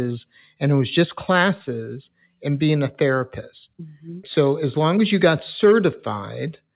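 Speech, with no technical fault to be heard. It comes over a WebRTC call path that is working as it should, and the lack of any sound above 4 kHz points to a narrowband codec such as G.711 mu-law at 64 kbps.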